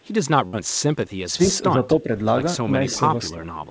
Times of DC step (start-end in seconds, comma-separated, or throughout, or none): none